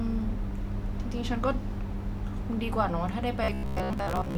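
Speech, with robotic sound from repeated short buffers from 3.44 s to 4.37 s. Over that stretch the voice collapses into a rigid, metallic buzz at 66.8 Hz that only loosely tracks the speech contour. The likely cause is input arriving too seldom, so the playback path keeps recycling its last fragment of roughly 15 ms. That fragment fills most of the interval while the real audio in between is skipped, and the repetition rate imposes the fixed buzz pitch.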